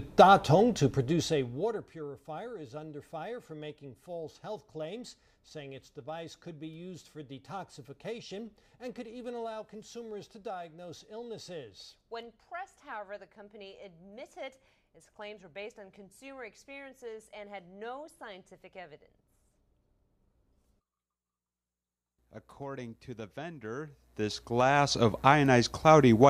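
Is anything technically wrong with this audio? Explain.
Yes. Zipper noise, from 0.84 to 2.08 s: the level drops by roughly 20 dB in coarse, unsmoothed steps, around 40 a second, instead of a continuous ramp. Each jump clicks, so a fast ticking buzz rides on the sound during the fade.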